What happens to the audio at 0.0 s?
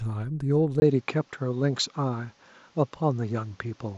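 Nothing goes wrong at 0.0 s; the audio is intact there with no fault.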